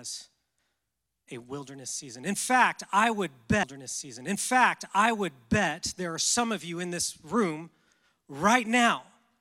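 A stream segment was repeated: the player queued the same chunk twice, so from 3.63 to 5.65 s, after "fact I would", about 2.0 s of speech replays before "there are some of".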